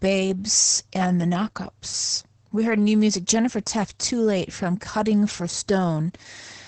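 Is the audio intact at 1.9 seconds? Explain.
No. At 1.9 seconds the speech carries Opus voice compression, as it does for the whole clip. The coder is running in its SILK linear-prediction mode at wideband, so nothing remains above about 8.6 kHz, and the excitation signal is coded coarsely, which fits a low bitrate around 10 kbps. The codec damage is heavy: the speech sounds muffled and hoarse, with a slightly robotic quality.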